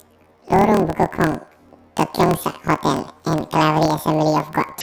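Throughout, planar audio read as interleaved: each 26.12 ms block plays twice at double speed, so the speech sounds an octave high with a 38.3 Hz flutter.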